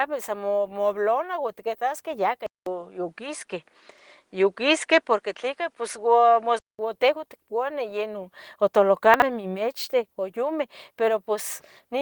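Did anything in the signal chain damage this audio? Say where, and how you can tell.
Yes. From 2.46 s to 6.79 s the sound turns duller, with nothing above 10.5 kHz and a level shift of roughly 5 dB. A 200 ms gap marks the switch, and a faint new noise floor sits around 50 dB below the signal. On a spectrogram the upper band is sharply cut off across that span. This is likely an input switched to a poorer device at the driver stage, with a different microphone bringing its own band limit, level and hiss.

Two brief garbled moments, at 3.92–4.00 s and 9.14–9.22 s, come from chunks out of order. A 20 ms chunk was delivered three chunks late at the buffer or network stage, so it plays after material that should follow it. Nothing is missing, but the waveform shows three abrupt discontinuities in each span, and the spectrogram shows thin vertical broadband lines at the joins where the sequence breaks.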